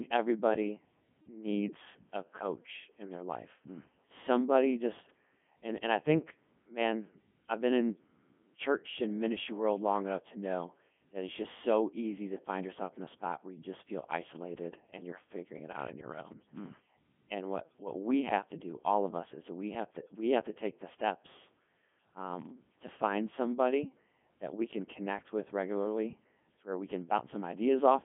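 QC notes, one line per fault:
Throughout: Codec 2 vocoder. The speech is robotic and buzzy because the waveform itself is not carried. Only pitch, voicing, energy and a coarse spectral envelope survive, and the decoder rebuilds the voice from sine waves, giving heavy codec damage. The level of degradation fits the codec's 3.2 kbit/s top mode. Band-limiting to roughly 150 Hz to 3.4 kHz, with nothing above 3.5 kHz, adds a thin, radio-channel quality.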